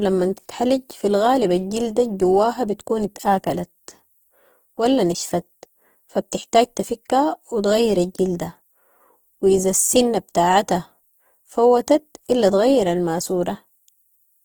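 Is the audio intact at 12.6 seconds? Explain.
No. At 12.6 s, as throughout the speech, tones sound grainy, rough and noisy; this is likely Opus compression, its music mode refilling starved bands with noise at roughly 16 kbps.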